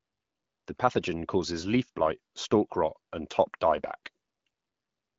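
Nothing's amiss in this speech recording; it simply comes through an AMR wideband (HD Voice) link at 12.65 kbit/s, so the top of the band stops at 7.3 kHz, exactly as that codec path is meant to sound.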